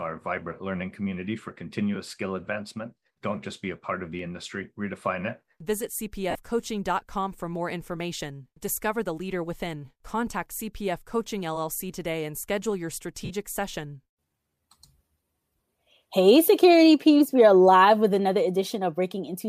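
A speech clip with two kinds of fault. At 4.19 s, between "a part of the" and "industry redefine it", there is a single sharp click. The waveform jumps abruptly, and no sound goes missing. This is likely dropped samples, with a fraction of a millisecond cut from the stream. The loss is far too brief to remove anything audible, so only the step remains. The second fault is lost LE Audio frames. It occurs twice. At 6.30 s the sound breaks for 45 ms. At 13.25 s, right after "today and schedule your", it breaks for 52.5 ms. Both lengths fit a run of 7.5 ms frames being lost. The decoder fills each gap by repeating the last spectrum with scrambled signs. That turns the speech into a brief noisy smear that fades toward silence.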